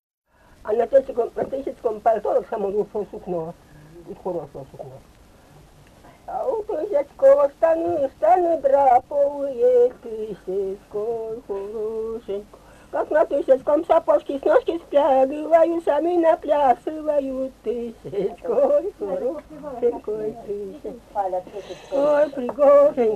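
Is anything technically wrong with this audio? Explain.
No, the signal shows no technical faults anywhere in the recording.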